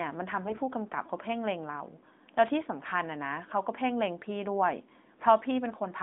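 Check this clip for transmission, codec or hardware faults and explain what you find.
One transmission fault is audible, in a short stretch of the speech carried over narrowband mobile coding.

AMR bit errors, 0.46 to 0.60 s: the less protected bits of the AMR frames arrived flipped, at a rate of roughly one bit in twenty, while the check on the key bits still passed. The decoder therefore placed its excitation pulses wrongly and applied slightly wrong pitch, gain and spectral values. For that stretch, about seven 20 ms frames' worth, the voice keeps its pitch and level but turns hoarse, scratchy and gargly, inside the band-limited sound of the AMR narrowband mobile codec.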